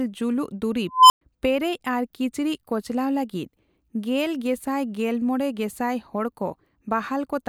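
A speech clip with an unstable filter at 0.92 s. A tone around 1 kHz swells out of the audio and grows very loud in about 0.18 s. It reaches clipping, then the sound cuts out. About 0.11 s of silence follows, ending near 1.21 s. A recursive filter with bad coefficients is feeding back on itself. Its output runs away and overflows. The silence lasts until the filter resets.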